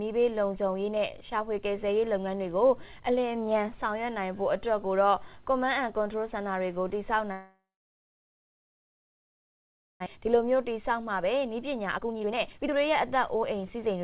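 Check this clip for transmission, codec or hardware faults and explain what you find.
Two transmission faults stand out, heard through a narrowband call path with nothing above 4 kHz, which fits G.711 A-law at 64 kbps.

From 7.32 to 10.08 s the sound dies away into a fading buzz, then about 2.4 s of near-silence before it resumes, with roughly 1.6 s gone for good. This is likely a long network dropout, with the receiver concealing the gap until it gave up.

From 10.15 to 14.01 s the audio runs hurried, about 23% faster (a speed of 123%) at unchanged pitch. This is a jitter buffer speed-up: after the stall, packets piled up and the receiver trimmed short pitch-period slices to shed roughly a second of built-up delay.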